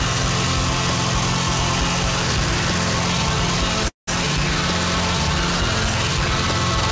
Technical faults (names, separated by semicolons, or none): call audio freeze